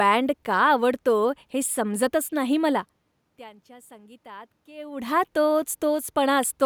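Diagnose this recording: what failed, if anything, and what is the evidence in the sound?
No system stage has failed: the steady background is the room's own noise, and the level changes at around two and a half and four and a half seconds are the talker moving relative to the microphone, not anything in the signal chain.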